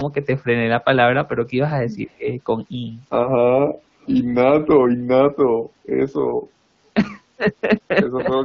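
From 2.07 to 2.27 s the speech dips by about 15 dB for roughly 150 ms, and again from 8.24 s to the end for about a tenth of a second. This is speech suppressed in double talk, likely the echo canceller turning everything down while both sides spoke at once. At 4.01 to 4.12 s, a very faint scrap of the voice returns 248 ms late, around 30 dB below the speech. This is an echo leak, likely loudspeaker sound that the far-end echo canceller failed to remove.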